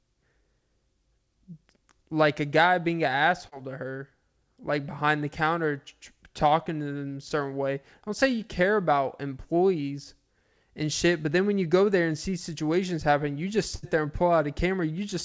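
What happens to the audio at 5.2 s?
Nothing goes wrong at 5.2 s: the speech carries on intact through the call path, with its band ending at about 8 kHz as a wideband call codec such as G.722 would leave it.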